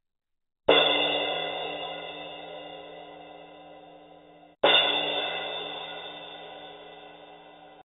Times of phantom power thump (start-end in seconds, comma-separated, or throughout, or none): none